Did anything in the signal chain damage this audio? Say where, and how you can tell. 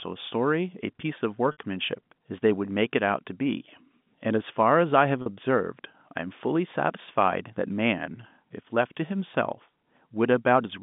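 Yes, at the network stage: packet loss with pitch repetition at 1.52 s and 5.22 s, heard as a brief, buzzy hold. The receiver looped the last pitch period across the 60 ms and 40 ms gaps, so the spectrogram shows frozen harmonics and the waveform shows identical repeating cycles.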